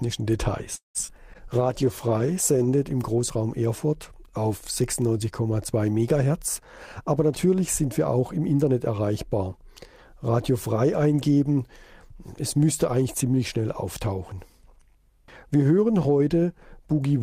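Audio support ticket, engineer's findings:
0.75–0.98 s: sound held over and fading into about 140 ms of silence, roughly 190 ms of gap inserted, nothing lost. Likely a call audio freeze: delayed packets emptied the jitter buffer.

1.07–1.11 s and 1.16–1.21 s: brief smears or wobbles. Short concealed packet loss: 40 ms missing each time, bridged by extrapolating the last sound, and playback pulls in about 20–30 ms.

1.32–3.60 s: rough, muffled top end. Call bitrate drop from 48 to 16 kbps, lowest for 1.17 s. The bandwidth estimate fell, forcing coarser Opus coding and a lower cutoff.

1.34–1.37 s: abrupt jump forward. Skip ahead: about 70 ms of audio dropped with only an 8 ms bridge, so the two sides are spliced almost directly.

1.48–2.77 s: drawn-out, slowed sound at unchanged pitch. Jitter buffer slow-down to 91% speed, with 120 ms added by repeating pitch periods to rebuild the buffer reserve.

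6.67–8.70 s: hurried delivery at the same pitch. Jitter buffer speed-up to 109%, with around 200 ms trimmed in small cuts to shed excess buffered delay.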